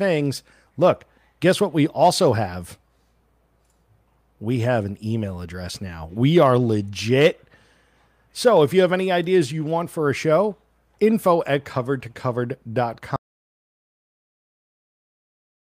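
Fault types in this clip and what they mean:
audio dropout to silence: at 13.16 s the speech cuts out mid-flow, and silence with no room tone runs to the end, likely from a lost input signal.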